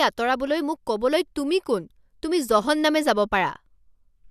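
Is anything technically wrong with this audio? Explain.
No, nothing technically wrong can be heard in this speech recording. No fault shows up anywhere in it.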